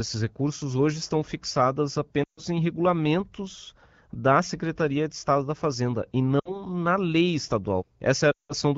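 At 2.24 s, after "recursos hoje estão fixadas", lost AMR speech frames leave a 140 ms gap that quickly drops to near silence before "em regulamentos da"; 60 ms at 6.39 s, 180 ms at 8.31 s. The decoder repeats the last pitch with falling gain: frozen harmonics on the spectrogram, a tapering waveform.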